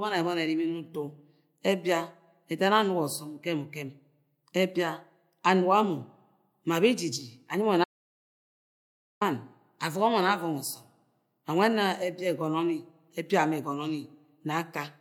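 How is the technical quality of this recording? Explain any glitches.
The recording has one clear glitch, an audio dropout to silence. From 7.84 to 9.21 s the speech cuts to silence with no room tone for about 1.37 s, then resumes mid-flow; the likely cause is a lost input while zeros kept being written.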